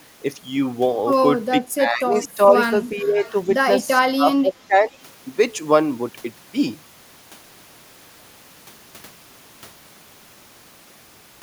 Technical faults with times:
1.51-2.55 speech suppressed in double talk
2.23-2.28 echo leak
2.95-3.30 echo leak
3.01-3.33 speech suppressed in double talk
4.01-4.94 speech suppressed in double talk

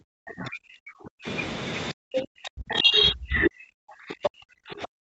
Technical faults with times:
0.00-1.27 speech suppressed in double talk
1.91-5.01 speech suppressed in double talk
2.70-2.78 other side's voice leaking through
4.23-4.30 other side's voice leaking through

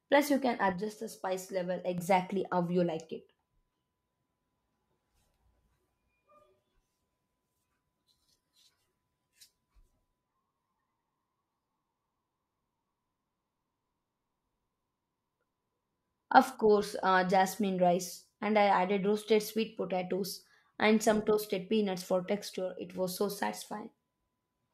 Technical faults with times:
0.72-1.98 one channel drops out
22.55-22.95 one channel drops out

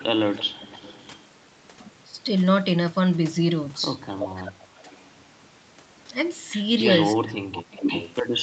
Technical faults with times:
0.00-1.27 echo leak
0.31-0.45 speech suppressed in double talk
4.09-5.04 echo leak
4.19-4.87 speech suppressed in double talk
6.94-8.43 echo leak
7.15-7.83 speech suppressed in double talk

